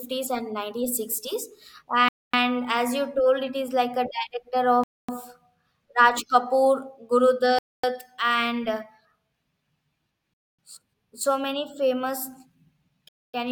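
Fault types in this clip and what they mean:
gap between chunks: Hard-edged 250 ms silences break into the speech at a steady rhythm, one just after "is like a director". The audio plays in 2.5 s chunks with silence left at each join, so nothing is lost, only interrupted.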